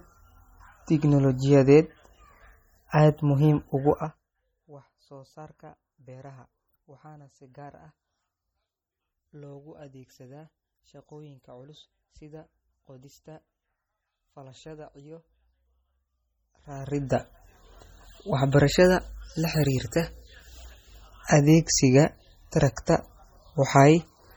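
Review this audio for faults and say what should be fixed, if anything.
Heavy MP3 compression runs throughout the speech. Weak frequency lines are dropped and return frame by frame, giving a watery, swirling texture with smeared attacks. This fits a likely bitrate of about 32 kbps, and nothing is present above 20.6 kHz. Unlike a plain low-pass filter, this damage keeps shifting from moment to moment. To prevent it, keep the original uncompressed file or encode at a much higher bitrate.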